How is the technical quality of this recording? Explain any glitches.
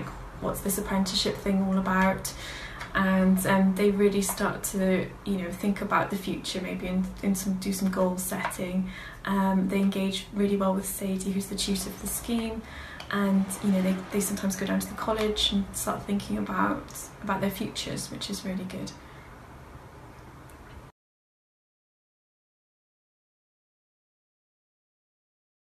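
The technical quality of the recording holds up, with no glitches to explain.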